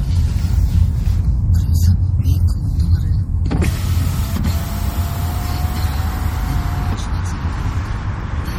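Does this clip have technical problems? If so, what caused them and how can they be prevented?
Yes. Across the whole clip the sound has a watery, swirly quality, and the damage is plainly audible, so this is likely MP3 compression at a low bitrate, something like 48 kbps. With that few bits, the encoder throws away weaker frequency components and lets them flicker in and out from frame to frame, which is where that unstable texture comes from. To prevent it, keep the source uncompressed or export at a much higher bitrate.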